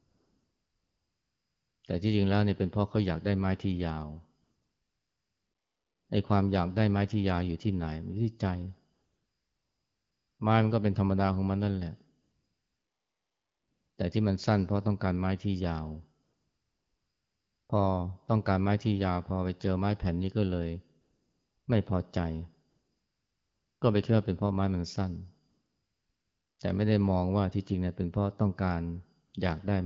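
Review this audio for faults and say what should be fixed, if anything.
AMR comfort noise: the sending phone's voice activity detector judged the talker silent and stopped transmitting speech frames, so the receiver filled each pause with synthetic noise built from a rough estimate of the background's level and spectrum. This happens nine times, between 0.0 s and 29.33 s, in gaps lasting from 0.06 s to 1.83 s. The longest are at 0.0 to 1.83 s, 12.21 to 13.97 s and 4.41 to 6.09 s. In each gap the real background is swapped for a smooth, steady hiss that switches in and out around the speech. The underlying wideband coding sounds clear, which fits a rate around 12.65 kbit/s. To prevent the switching, disable discontinuous transmission on the link, or make the voice activity detector less aggressive with a longer hangover time.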